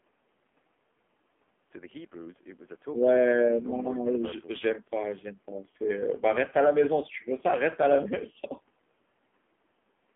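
Across the whole clip the speech sounds buzzy, thin and synthetic, confined to roughly 200 Hz to 3.4 kHz. This is the AMR narrowband mobile codec, rebuilding the voice from a crude vocal-tract model at a heavily starved rate that fits its 5.9 kbps mode.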